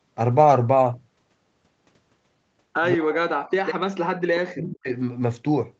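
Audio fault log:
2.94–4.88 s, speech suppressed in double talk: with both ends talking at once, the echo canceller likely mistook the near talker for loudspeaker echo and attenuated everything, so the speech sinks by roughly 40 dB at its deepest and breaks up for about two seconds.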